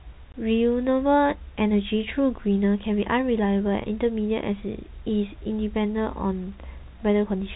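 At 0.32 s the speech drops out for 20 ms. This is packet loss filled with silence. One lost packet's worth became a hard-edged gap.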